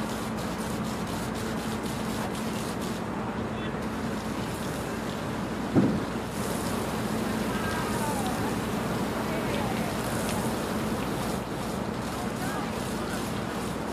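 From 6.23 to 11.52 s, digital radio blending to analogue: a 174 ms cross-fade to FM brings hiss and about 2 dB level change, never silence.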